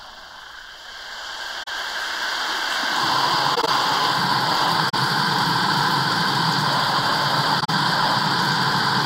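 It's an everyday-sound recording with four damaged stretches at 1.63–1.68, 3.52–3.68, 4.86–4.94 and 7.60–7.70 s. That's corrupt frame concealed: the AAC decoder caught damaged frames and papered over them.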